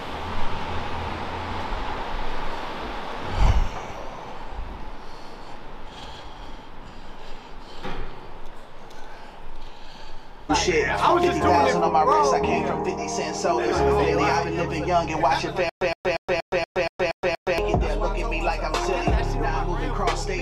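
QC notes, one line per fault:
15.69–17.58 s, stutter with silent gaps: a 118 ms burst recurs eight times at a 237 ms period with digital silence between, likely a stalled stream replaying its last fragment.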